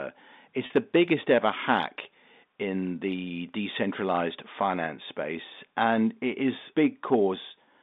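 At 0.66 to 0.70 s, just before "the biggest ever hack", there's packet loss with pitch repetition. About 40 ms went missing, likely four 10 ms packets, and the receiver filled the hole by replaying the last pitch period. It's short enough to come across as a slightly held, buzzy sound, heard over the narrow 200 Hz to 3.7 kHz band of the G.711 line.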